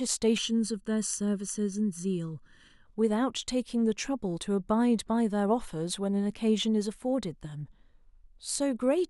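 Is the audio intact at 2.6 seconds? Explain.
No. From 0.38 to 2.86 s the speech sounds hollow and phasey, a channel delay (comb filtering): one channel lags by under a millisecond, so mono summing notches evenly spaced frequencies, the first near 700 Hz.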